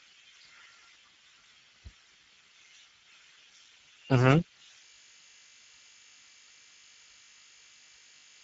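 Throughout, Speex codec damage, consistent with roughly 10 kbps, starves the excitation so the speech sounds noisy and hoarse; a spectrogram shows nothing above 7.7 kHz.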